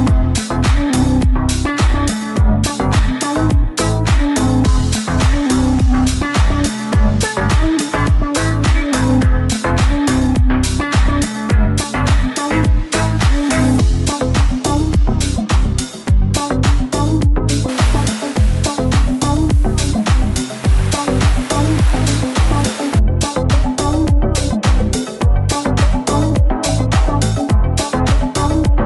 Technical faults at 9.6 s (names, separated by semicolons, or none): none